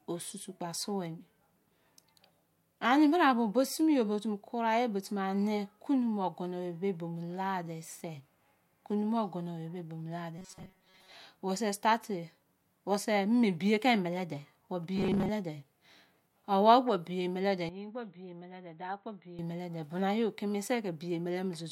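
From 10.38 to 11.12 s, and again from 14.96 to 15.30 s, the speech takes on a robotic sound from repeated short buffers: a rigid, metallic buzz at 188 Hz that only loosely follows the speech. The likely cause is audio arriving too slowly, so the playback repeats a fragment of about 5.3 ms, and most of the real audio in those stretches is skipped. A spectrogram shows evenly spaced horizontal harmonics at multiples of 188 Hz, and the waveform shows a short, identical cycle repeating.

From 17.69 to 19.39 s, the input switched to a poorer device, likely a headset or secondary microphone. There is no gap at the change. The sound turns dull and boxy, and drops by about 10 dB. A new noise floor appears, roughly 40 dB below the speech. On a spectrogram the upper band is sharply cut off, and the waveform envelope steps down for that stretch.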